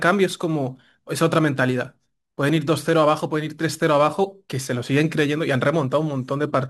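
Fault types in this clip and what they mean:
Crude rate conversion: the sample rate was raised by a modest ratio, which fits a 44.1 kHz to 48 kHz change, by repeating the nearest existing sample instead of filtering. The repeats fall in a fixed pattern set by the two rates, producing shifted, inharmonic copies of the speech. Throughout the clip this shows as a gritty, inharmonic fizz roughly 30 dB below the speech, rising with louder and brighter sounds.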